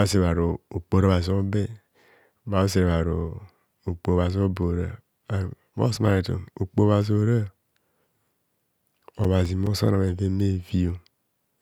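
From 8.82 to 10.09 s the speech carries CD scratch ticks: seven sharp clicks about five a second, each only a few milliseconds long, where a disc blemish defeated error correction once per revolution. The waveform shows thin spikes or notches; the spectrogram, evenly spaced vertical lines.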